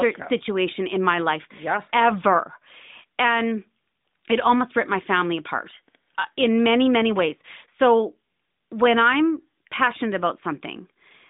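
Nothing faulty can be heard anywhere in this speech.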